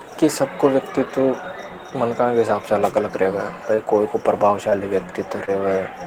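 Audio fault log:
3.75–3.79, 4.69–4.73 and 5.45–5.49 s: short concealed packet loss. Each time about 20 ms of audio failed to arrive. The decoder extrapolated the preceding sound across the hole and cross-faded back, leaving a brief smear or wobble where detail went missing.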